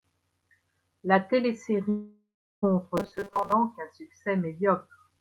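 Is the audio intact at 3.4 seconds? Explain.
No. From 2.97 to 3.52 s the speech becomes robotic sound from repeated short buffers: a rigid metallic buzz locked at 200 Hz, likely from a 5 ms chunk looped while most of the real audio is skipped. Unlike ordinary codec roughness, the sound follows the voice only roughly.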